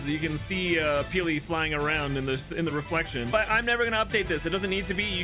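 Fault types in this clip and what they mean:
No technical faults detected in this audio.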